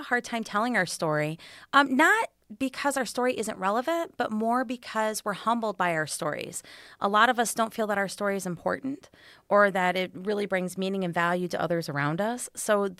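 Listening to the speech recording turned up nothing that stood out as a technical problem at any point.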